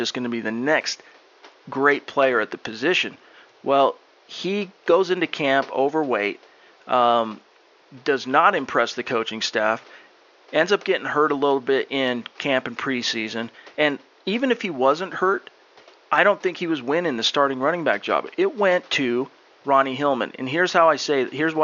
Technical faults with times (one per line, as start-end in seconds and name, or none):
none